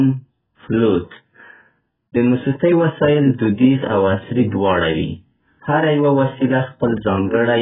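Throughout, heavy AAC compression dulls the speech. Nothing sounds above 3.8 kHz, leaving a flat ceiling on a spectrogram, with warbling holes, likely from a very low bitrate around 8 kbps.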